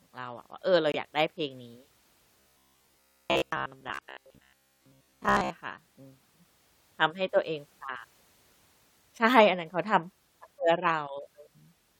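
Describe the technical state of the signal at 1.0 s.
Just before that point the speech drops into an abrupt silent hole from 0.92 to 0.96 s. This is a corrupt frame muted: the decoder rejected damaged compressed frames, and the player substituted silence.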